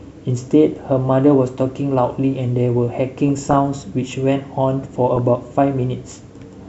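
Three bursts of DAB burbling land at 0.73 to 0.84 s, 3.29 to 3.58 s and 5.16 to 5.19 s. Weak reception left a fraction of a percent of bits corrupted past the error correction, so damaged MP2 samples put short blips of noise in single sub-bands and damaged scale factors make individual sub-bands jump in level for up to a frame. The speech picks up short blips of noise in single sub-bands. Unlike a dropout, the sound is scrambled band by band rather than muted.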